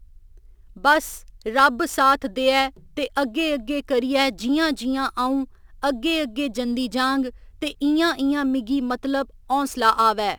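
Throughout, a gritty, inharmonic fizz about 25 dB down follows louder, brighter speech. This is crude rate conversion, with samples repeated unfiltered, which fits a 44.1-to-48 kHz change.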